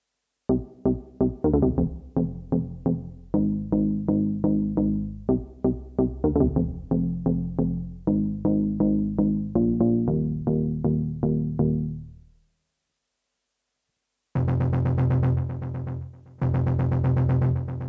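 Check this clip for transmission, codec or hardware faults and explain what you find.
No transmission, codec or hardware faults turn up in this clip, which has simply passed through ordinary call microphone processing with nothing above 8 kHz.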